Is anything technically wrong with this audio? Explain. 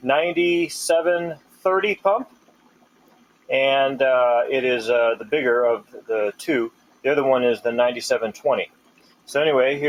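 Yes. A speech-style noise suppressor was left running on this sound the whole way through. It treats steady material as noise, so levels swing by around 20 dB and the sound pumps and thins.

There are also clear spots where the noise suppressor cut sound hard: 1.35 to 1.65 s, 2.25 to 3.49 s, 5.8 to 6.09 s, 6.69 to 7.05 s and 8.67 to 9.31 s. Held parts sink by about 17 to 18 dB there, and sustained tails drop away.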